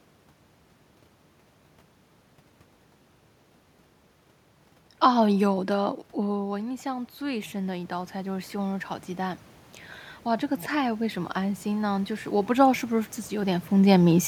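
From 5.49 to 9.49 s there is automatic gain rising. The talker moves away from the microphone around 6 s, so the input drops by about 11 dB, and the gain control slowly adds about 9 dB to compensate. Voice and room noise swell together over those four seconds. A second rise of about 4 dB follows from 10.24 to 13.76 s, again lifting the background with the voice, while the talker shifts position near 13.5 s.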